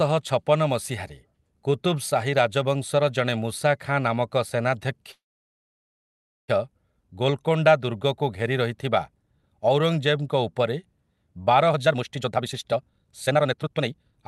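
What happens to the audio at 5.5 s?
At 5.5 s the speech sits inside a call audio freeze running from 5.11 to 6.50 s. The likely cause is delayed packets draining the jitter buffer. The last sound carries on as a brief fading buzz or hiss, then about 1.29 s of silence, until speech resumes where it stopped, about 1.37 s late, with nothing lost. On a spectrogram, a short smeared tail gives way to an empty stretch; the waveform goes flat before speech returns.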